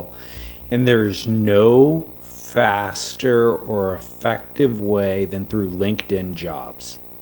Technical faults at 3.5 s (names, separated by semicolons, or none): video or display buzz; time-stretched section